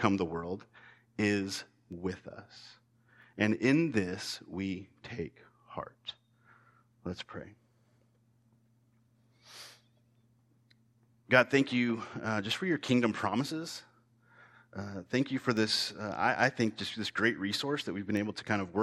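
A receiving device running on its own clock, about 40 parts per million off the sender's, drops or repeats one sample each time the clocks slide past. From 0.63 s, just after "the world", to the end, word clock ticks recur steadily about every 0.7 s, around thirty in all.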